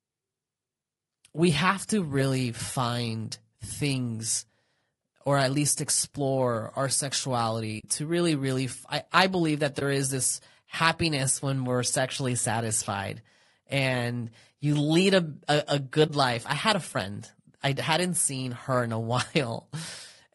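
From the start the speech sounds rough and grainy, with noise between harmonics and a thin, synthetic top, plainly audible damage likely from low-delay AAC compression, AAC-ELD at around 32 kbps. A soft-edged hole comes at 7.79 to 7.84 s, just before "to really really"; brief dips come at 9.79 to 9.82 s, between "I I believe that" and "is this happiness when"; and at 16.07 to 16.10 s, between "lead a a a" and "life I had a". This is AAC frame loss with muting: missing frames were zeroed and the overlapping windows faded the sound out and back in over about a frame, losing roughly 40, 20 and 20 ms.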